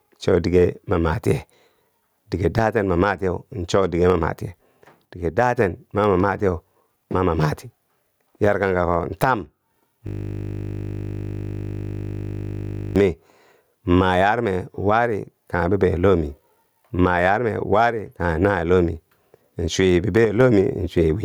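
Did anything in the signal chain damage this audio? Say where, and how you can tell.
Yes. Throughout the speech the level swings by around 15 dB. This is gain pumping, and its likely cause is input gain set far too high for the microphone, with a fast limiter or compressor in the capture or call-processing stage clamping down on every peak. That squeezes loud and soft passages together and leaves the speech squashed.

From 5.06 to 5.58 s, between "cho dige ma matiye" and "ma ma matiyeu ma", the sound abruptly falls by about 6 dB and then returns. The same drop happens again from 20.25 to 20.41 s. This is one channel dropping out, likely in the analogue wiring or stereo input path. With one side gone, the mono sum loses half of whatever both channels shared, and anything present only in the missing channel vanishes.

From 10.07 to 12.96 s, the speech is replaced by a steady 50 Hz buzz, one 20 ms fragment repeating exactly for nearly three seconds. 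This is a system hang loop in the driver or buffer stage. The computer or driver stalled while the audio hardware kept cycling through the same ring buffer, playing its contents over and over. The 20 ms repeat fits a buffer of that duration, which is why the loop rate sits at 50 Hz.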